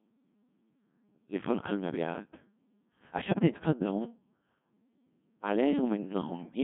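Codec 2 vocoder processing runs throughout this speech clip, and its heavy damage suggests a very low-rate mode of about 1.6 kbit/s. The decoder keeps only pitch, voicing, energy and a coarse spectral envelope per frame and rebuilds the voice from summed sine waves, so the original waveform is gone. The result sounds robotic and buzzy, confined to a band of roughly 150 Hz to 3.5 kHz. Bit errors on digital voice radio strike from 3.28 to 3.49 s. Over those 0.21 s, corrupted bits, around 7 percent of them, reach the vocoder. This fits a handful of consecutive frames being hit. Because each bit steers a whole frame's pitch, level, voicing or spectral shape, the synthetic voice lurches in pitch and loudness and collapses into warbling, bleepy gibberish before recovering.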